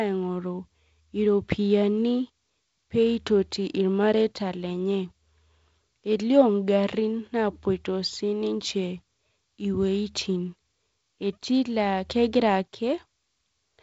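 No technical faults are audible.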